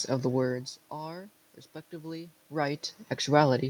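Nothing technical goes wrong in this bit of speech; the background noise is just the room itself, and the level shifts around half a second and two and a half seconds in are only the talker moving relative to the microphone.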